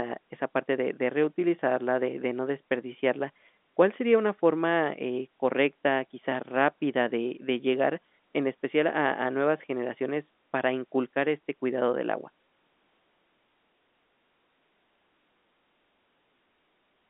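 Speech over a telephone line, with no technical faults.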